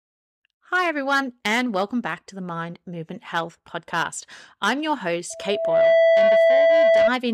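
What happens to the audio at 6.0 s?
At 6.0 s the speech is buried under a loudspeaker feedback squeal that runs from 5.30 s to 7.11 s, starting just after "I'm your". A microphone is picking up the loudspeaker it feeds, and at 660 Hz the loop gain rises above unity, so that frequency reinforces itself on every pass. It swells over roughly half a second into a sustained, piercing tone that sits around 10 dB above the speech.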